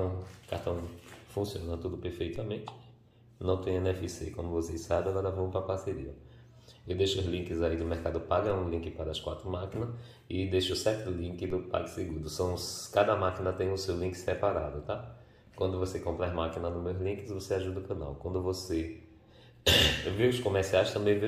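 At 2.36, 8.50 and 11.50 s, a DC step shifts the zero line by about -34 dBFS. Each lands as a low thump, then fades as a 5 Hz high-pass drains it.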